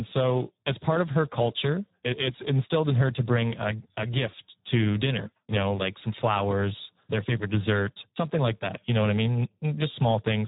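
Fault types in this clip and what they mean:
Speex codec: a low-rate CELP speech codec; here the sound points to roughly 8 kbps with heavy damage, leaving the speech hoarse, noisy and edging toward robotic, with nothing above about 3.8 kHz. The gritty excitation buzz, rather than muffling or warbling, marks it apart from simple band-limiting or MP3-style smearing.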